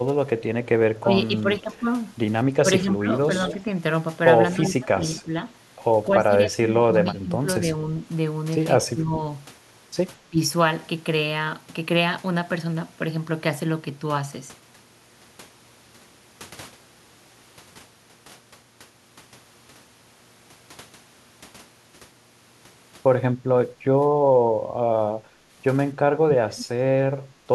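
A speech recording with three kinds of echo-canceller trouble. Speech suppressed in double talk shows up from 0.0 to 10.39 s, where the voice dips, by something like 15 dB at worst, for around three seconds in total. There is a short dip between 23.58 and 24.57 s, and a deeper one of roughly 25 dB between 26.25 and 27.51 s, lasting about half a second. The likely cause is the far side talking at the same moment: the canceller could not tell this talker apart from its loudspeaker echo and pulled the level down on both. An echo leak also appears early, heard as a delayed copy of the voice. From 0.65 to 1.78 s it trails by 220 ms and sits very low, roughly 35 dB under the speech. Brief, stronger scraps follow at 3.49 to 3.54 s, about 15 dB down, and 5.17 to 5.22 s, about 25 dB down, both delayed 249 ms. The cause is likely a loudspeaker-side canceller letting part of its microphone pickup through and sending it back. 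Finally, background gated by the echo canceller occurs at 25.22 to 25.34 s: the room sound drops by about 9 dB for roughly a tenth of a second and then returns. Here the canceller clamped the microphone hard while the loudspeaker was active, and the level came back once it released.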